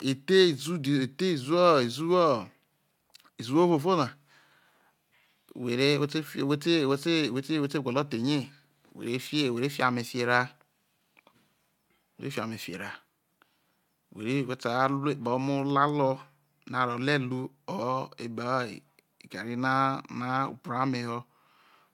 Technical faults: none

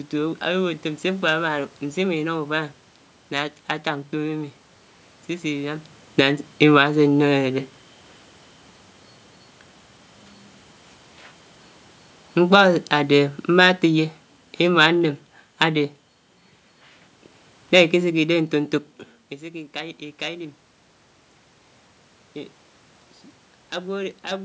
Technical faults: automatic gain falling

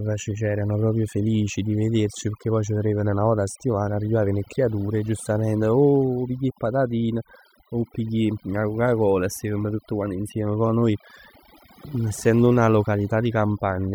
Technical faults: overdone noise removal

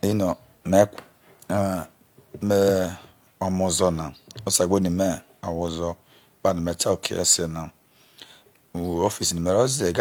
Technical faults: none

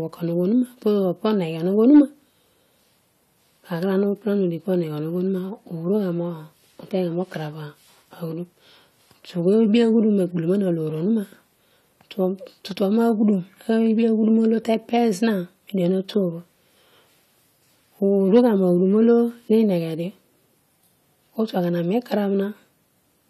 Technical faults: hard clipping

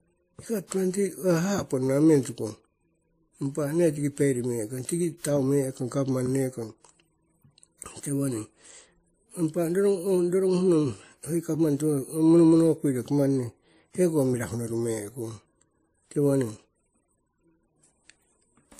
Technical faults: transcoding between lossy codecs

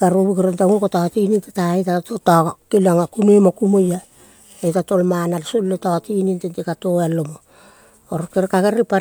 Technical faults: none

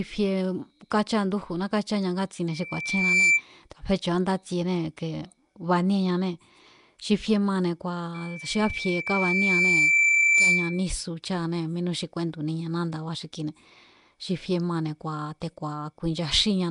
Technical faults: Nellymoser compression; loudspeaker feedback squeal

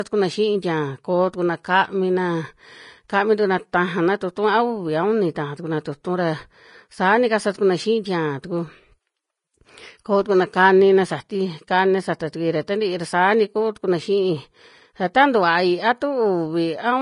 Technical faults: Vorbis compression

